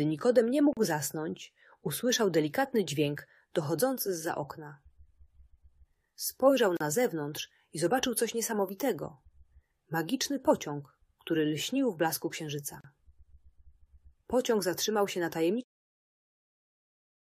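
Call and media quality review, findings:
Gap at a join of encoded pieces: short dropouts of about 37 to 38 ms open in continuous sound at 0.73 to 0.77 s, 6.77 to 6.81 s and 12.81 to 12.84 s, repeating every 6 s. Edges smeared. Sound resumes where it stopped. Probable component: segmenting or concatenation stage. Separately encoded 6 s pieces joined untrimmed, so encoder start delay and last-frame padding survive as silence at each seam. Closing fade-out from around 15.5 s is deliberate.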